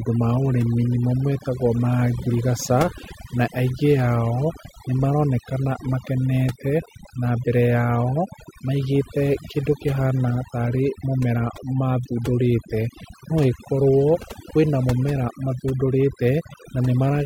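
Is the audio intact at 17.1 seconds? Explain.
No. At 17.1 s, as throughout the clip, overdone noise removal gates frequency bands near the noise floor, leaving twinkling specks in near-silence and stripping away quiet parts of the voice.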